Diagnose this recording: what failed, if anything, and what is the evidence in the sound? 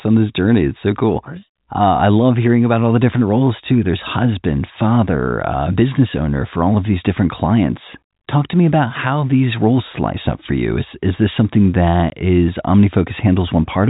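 Network packet loss filled with silence at 12.1 s: a hard gap of about 20 ms, which fits one lost packet. It shows as a blank vertical strip across the G.711 telephone band up to its 4 kHz limit.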